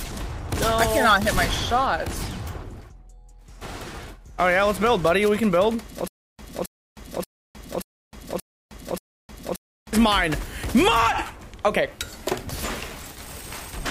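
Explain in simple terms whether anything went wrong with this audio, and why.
From 6.08 s to 9.93 s there is a stutter with silent gaps: a 0.27 s burst repeats six times, every 0.58 s, separated by 0.31 s of dead silence. The playback likely stalled, replaying its last fragment at each retry, so the audio for that stretch is lost.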